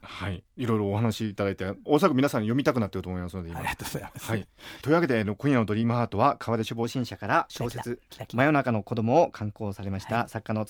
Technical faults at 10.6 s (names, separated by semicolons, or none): wrong sample rate